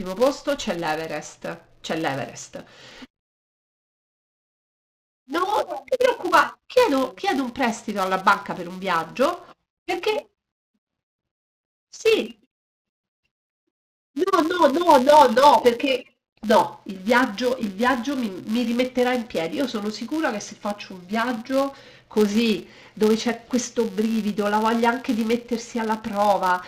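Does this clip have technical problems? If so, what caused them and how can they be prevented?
Yes. A filter restarted on every block buzzes at 188 Hz throughout, tracking speech level. That fits a 256-sample buffer. Preserve filter state between blocks to prevent it.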